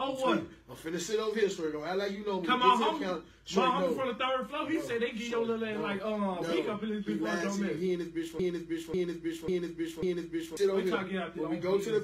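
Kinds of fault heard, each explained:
Broken-record loop: from 8.39 to 10.57 s, one 0.54 s fragment repeats four times back to back, identical each pass, likely from a stalled player resending its last buffer. Unlike echo, the repeats never fade, and the audio due there is lost.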